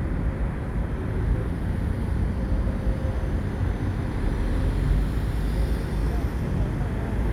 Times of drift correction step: none

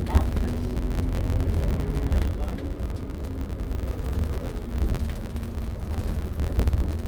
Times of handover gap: none

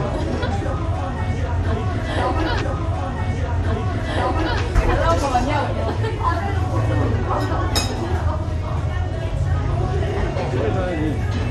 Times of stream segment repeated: 2.60-4.60

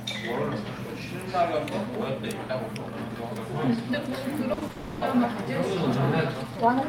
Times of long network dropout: 4.71-5.03

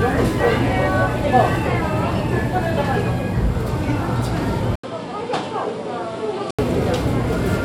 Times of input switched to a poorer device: 4.75-6.59

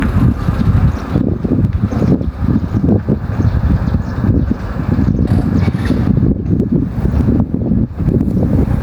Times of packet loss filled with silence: none

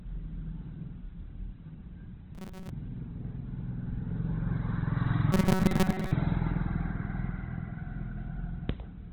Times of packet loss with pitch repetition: none

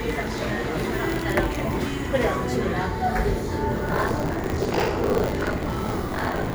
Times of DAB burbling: none

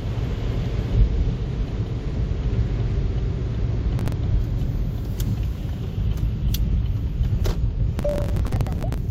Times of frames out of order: 0.50-0.70, 1.80-2.20

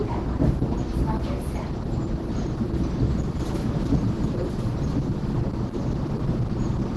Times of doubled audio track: 3.08-6.96

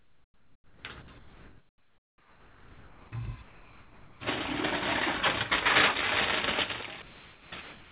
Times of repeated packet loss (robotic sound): none

